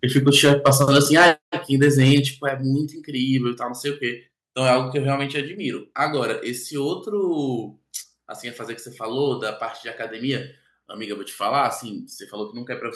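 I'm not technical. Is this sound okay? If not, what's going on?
No. Microphone overload, from 0.16 to 1.3 s and again from 1.82 to 2.19 s: the loudest parts of the speech turn harsh and crackly, likely because the microphone was set too loud and the tops of the peaks got cut off.

Microphone volume stepped down, at 0.47, 1.47, 2.49 and 5.55 s: the voice and background suddenly get quieter in one jump each time, likely the call software turning the microphone down to stop the distortion.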